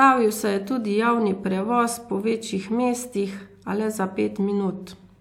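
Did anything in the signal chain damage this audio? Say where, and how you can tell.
No, nothing in the chain left a mark I can hear on this speech, so there's no damaged stage to point to.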